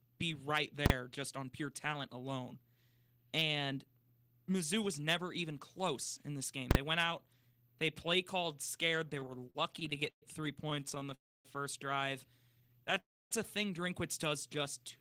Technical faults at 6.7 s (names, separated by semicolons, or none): invalid numbers at full scale